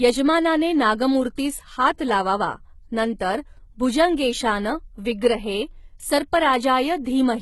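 Across the whole speech clip the treble has a synthetic, metallic grain and nothing extends above 11.8 kHz. The heavy damage is likely from HE-AAC compression at a low bitrate, which fits something around 16 kbps. The codec keeps only the lower spectrum and regenerates the top by copying lower bands upward under a coarse envelope. The rebuilt harmonics don't align with the real ones across the crossover, so s sounds come out gritty and lispy.

Pre-echo occurs at 1.98 s, 3.19 s and 7.04 s, spreading about 14 ms, 13 ms and 18 ms ahead of the attack. In each case a sharp onset fell late in a transform block. The quantisation noise, spread evenly across that block and sized for the loud part, leaks into the quiet moment just before it. You hear a brief hiss ahead of each attack, and the onset itself sounds softened and smeared.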